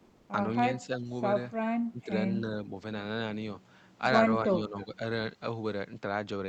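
From 0.05 to 0.29 s, the faint background, sitting about 34 dB below the loud parts, gives way to a steady, featureless hiss roughly 2 dB quieter, lasting 240 ms before the sound resumes. This is comfort noise in place of the background: the sender likely stopped transmitting during the pause (discontinuous transmission, as in Opus DTX), and the receiver filled the gap with synthetic noise shaped only loosely like the real room.

The speech then dips in level four times: 0.86 to 1.09 s (a shallow drop of about 5 dB), 1.90 to 2.11 s (a deep drop of about 15 dB), 2.42 to 2.71 s (about 5 dB again), and 4.45 to 5.00 s (about 10 dB, the longest, with about 400 ms affected). Each sounds like the talker being pushed back or partly swallowed. This is speech suppressed in double talk, likely because the echo canceller could not tell the talker from the far side's loudspeaker echo and turned both down. 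All of this arrives through a call path whose bandwidth tops out at 8 kHz.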